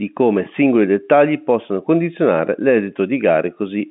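No technical faults can be heard anywhere in this speech. It comes through G.711 telephone coding (A-law, 64 kbps), which holds the sound to the phone band of about 150 Hz to 3.6 kHz with nothing above 3.8 kHz, and any quantisation noise from the coding is at most faint.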